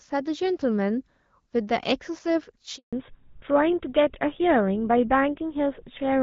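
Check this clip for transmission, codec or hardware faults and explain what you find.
Two faults are audible, a handover gap followed by a fallback to narrowband.

Handover gap, 2.77 to 2.93 s: the call is being passed from one network to another, and for about 160 ms no speech frames reach the receiver. The speech dies away within a few tens of milliseconds and is replaced by silence until the new link delivers audio again. Whatever was said during that stretch is simply missing.

Fallback to narrowband, from 2.93 s to the end: immediately after the handover, the speech loses everything above 4 kHz. Before the gap, the wideband AMR-WB (HD Voice) coding is heard at a quality that fits 12.65 kbit/s, with light coding texture and upper content reaching well past 4 kHz. After the gap, the sound fits an older narrowband codec such as GSM full rate at 13 kbit/s. Upper detail disappears, and the speech turns duller and rougher for the remainder of the clip.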